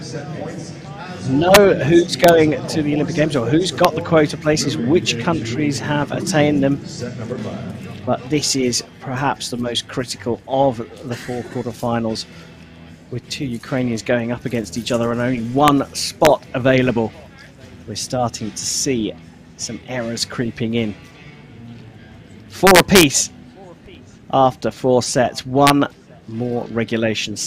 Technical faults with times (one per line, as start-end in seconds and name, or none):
1.54 integer overflow
2.24-2.29 integer overflow
3.85 integer overflow
15.68 integer overflow
16.25 integer overflow
22.67-23.03 integer overflow
25.67-25.70 integer overflow